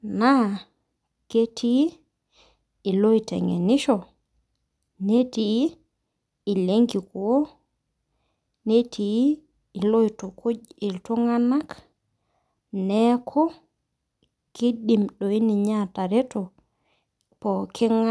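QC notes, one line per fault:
No fault found in the speech clip.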